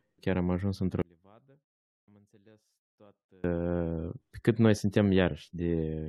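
From 1.02 to 3.44 s, one channel is likely inverted, so summed to mono the speech cancels, dropping about 32 dB to a faint residue.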